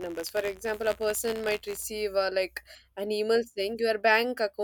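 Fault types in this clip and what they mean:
Buffer tearing: tiny slices of audio about 20 ms old splice into every buffer, an 86.1 Hz rattle until 1.85 s, showing as evenly spaced vertical spectrogram streaks.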